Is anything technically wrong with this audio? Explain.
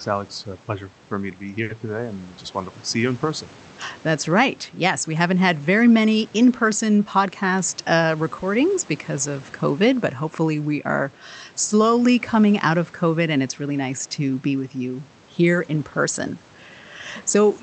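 Yes, there are two brief faults. From 1.63 to 1.80 s, one sound is held unnaturally long: a short stall from a late packet. The jitter buffer ran dry, so the receiver stretched the last sound for about 60 ms until the packet arrived, without skipping anything. From 6.98 to 7.35 s, the speech sounds hurried but keeps its pitch. This is a jitter buffer speed-up: the receiver trimmed roughly 70 ms of pitch-period slices to shrink excess delay, running at 116% speed.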